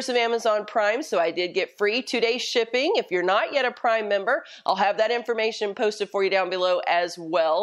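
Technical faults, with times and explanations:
No technical faults can be heard anywhere in this audio. There is nothing here to time or explain.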